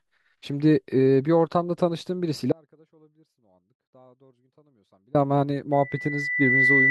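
A speech recording with two faults. From 2.52 s to 5.15 s there is an audio dropout to a faint residue: the speech cuts off abruptly for about 2.6 s and leaves only a faint trace, roughly 35 dB down, which points to a break in the signal, likely upstream of a path that stayed live. The hard cut with a faint residue rather than a taper sets it apart from a fade or a natural pause. From 5.72 s to the end, a loudspeaker feedback squeal grows as a single 2 kHz tone, swelling over about a second until it is slightly louder than the speech. Its steady self-building pitch distinguishes it from a one-off whistle or interference tone.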